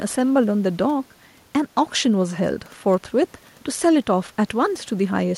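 No technical faults can be heard in this speech clip. A faint room noise sits about 36 dB below the speech, part of the recording itself.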